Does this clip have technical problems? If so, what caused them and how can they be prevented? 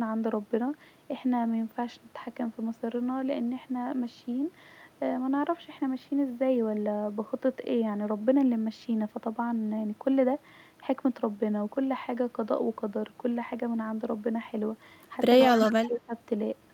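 Yes. From 15.37 to 16.13 s the speech is suppressed in double talk: the level dips by as much as about 15 dB for around 0.4 s in total. The waveform shows pinched gaps and the spectrogram shows the upper bands thinning. The likely cause is an echo canceller that muted the near talker while the far side spoke. Better acoustic isolation or a headset would prevent this.

From 15.41 to 15.87 s there is an echo leak: a faint copy of the voice, about 20 dB below the speech, trails it by 171 ms. A spectrogram would show ghost harmonics offset to the right. This likely comes from loudspeaker pickup that the canceller failed to remove. Using headphones prevents it.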